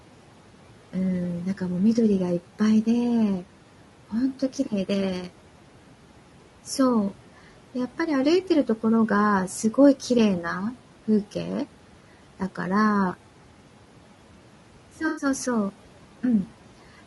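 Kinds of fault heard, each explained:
Noise suppressor artifacts, throughout: A suppressor estimates which frequency bands hold steady background and turns them down frame by frame, here by about 12 dB. The room noise, which sits about 19 dB below the speech, drops away in the gaps between phrases and returns beneath each one.
Low-delay AAC compression, throughout: The speech sounds rough and grainy, with a hiss-like fill between the harmonics and a top band that sounds flattened and somewhat synthetic. This is likely the low-delay AAC used in video calls. Its very short frames cannot separate closely spaced pitch harmonics well and leave fewer bits for the detail. The plainly audible damage points to a low bitrate, somewhere in the region of 32 kbps.
AAC frame loss with concealment, 15.08 to 15.25 s: For about 100 ms the audio turns into a smeared, noisy or phasey patch before clean decoding resumes. 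Several consecutive coded frames failed to arrive. The decoder covered the gap by reusing the last good spectrum with scrambled phase and estimated energy. Because the loss is short, the sound does not fade to silence. It only blurs briefly.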